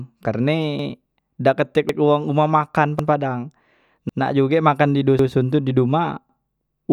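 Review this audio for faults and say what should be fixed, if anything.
Overlapping chunks: the speech was handled in 1.0 s chunks, each starting 100 ms early, so a 100 ms stretch plays twice at 0.79, 1.89, 2.99, 4.09, 5.19 and 6.29 s, a stutter every 1.1 s. Fix it by advancing each chunk by its full length, or by trimming or crossfading the shared 100 ms before joining.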